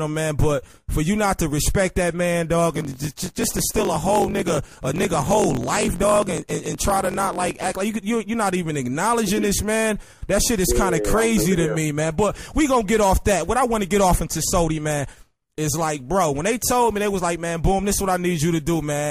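From 2.74 to 7.75 s there's a block size mismatch (truncated): one stage writes longer blocks than the next reads, so each block's tail gets chopped. You get a 45.9 Hz buzz and audio running 1.07 times fast, which fits 1024-sample blocks.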